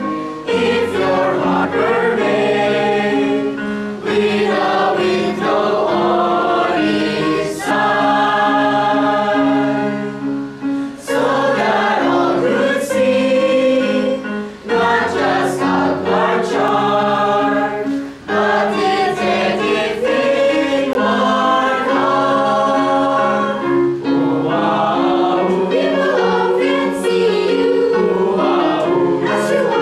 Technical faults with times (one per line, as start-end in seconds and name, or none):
1.64 compressed frames skipped
7.70 compressed frames skipped
16.68 block of digital silence
20.93 block of digital silence